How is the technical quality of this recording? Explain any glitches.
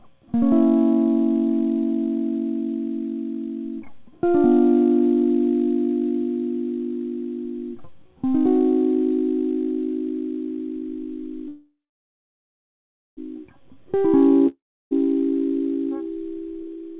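The recording has three clear glitches in the last few seconds, all typical of audio sent over a call link. The music is also band-limited, with nothing above 4 kHz, which points to a narrowband G.711-style call codec.

From 11.48 to 13.19 s there's a call audio freeze. The music stops and the last sound smears into a fading buzz, then about 1.4 s of near-silence. When it resumes, it picks up right where it left off, so nothing is lost but a 1.7 s gap gets wedged in. That's likely the signature of delayed packets leaving the jitter buffer empty while the receiver waits.

At 14.47 to 14.93 s there's a long network dropout. It's shorter, but this time content really goes missing. The last sound trails off into a fading hiss, there's about 0.32 s of silence, and the music comes back roughly 0.44 s further along. So that stretch just never plays. The likely cause is a run of packets that never arrived at all, as opposed to late ones.

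From 16.35 s to the end there's a jitter buffer speed-up. The music rushes along at about 140% speed, but the pitch stays the same. The receiver is shedding a backlog in its buffer by snipping out tiny pitch-period slices over and over, about a third of a second in total. You hear it as a hurried feel, and the tempo stops being steady.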